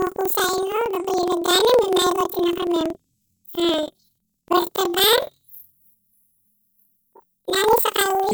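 From start to end, planar audio read as interleaved: each 46.4 ms block, which fits a 2048-sample layout, plays twice at double speed, so the speech sounds an octave high with a 21.5 Hz flutter. The spectrogram shows harmonics spread upward, broken by regular vertical seams.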